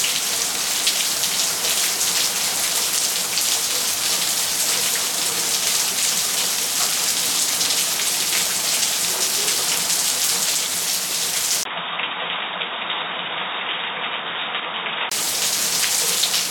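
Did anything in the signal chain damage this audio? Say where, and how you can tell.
Yes. An input switched to a poorer device from 11.63 to 15.12 s: after a 20 ms gap, the sounds turn dull with nothing above 3.8 kHz, drop roughly 5 dB, and gain a new noise floor around 35 dB down, likely from the driver changing capture devices.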